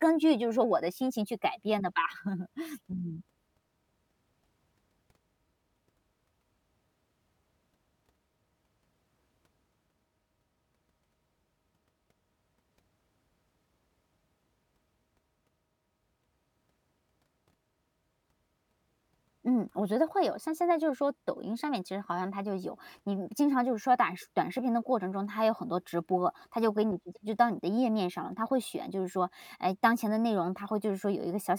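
Nothing in this speech recording stands out as a technical fault; it runs along without any glitch, dropout or distortion worth pointing to.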